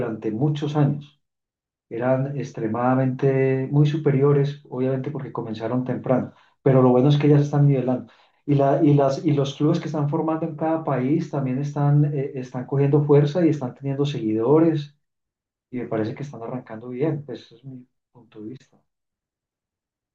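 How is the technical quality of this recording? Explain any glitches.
One glitch stands out in the recording. At 11.49 s there is a single sharp click. The likely cause is dropped samples, with about one sample missing. The waveform jumps abruptly to a later value, and that discontinuity produces the brief click.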